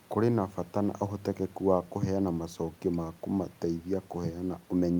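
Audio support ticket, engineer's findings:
No technical faults found in the speech signal; nothing on the playback path needs attention.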